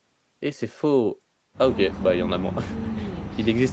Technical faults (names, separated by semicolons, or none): none